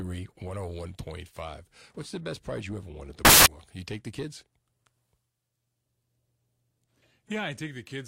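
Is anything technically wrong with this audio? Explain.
Yes. From 3.25 to 3.46 s the speech is replaced by loud, harsh broadband noise: samples built from the wrong bytes. Each sample's bytes are assembled misaligned or in swapped order, so the rapidly changing low bits land in the high-order position and dominate every value.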